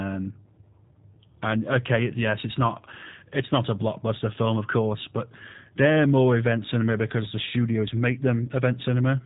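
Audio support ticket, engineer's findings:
G.729 codec, throughout the clip. Speech band-limited, nothing above 3.8 kHz. Plainly audible roughness and a synthetic timbre, because speech is rebuilt from a vocal tract filter, a pitch predictor and sparse pulses in each 10 ms frame, consistent with 8 kbit/s. Unlike a plain low-pass filter, the timbre itself is altered, not just dulled.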